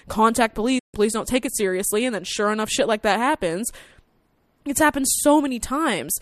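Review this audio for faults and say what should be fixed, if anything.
There's a digital broadcast dropout in this speech from 0.79 to 0.95 s. The sound fades to silence over about 8 ms and stays muted until around 0.95 s, so roughly 144 ms of programme is simply gone and doesn't come back. That's the receiver losing the signal or rejecting frames that failed their checksum, then muting until clean frames arrived; the gap length fits about six lost frames. To prevent it, improve reception at the receiver with better antenna placement or signal strength, or record from a more reliable feed.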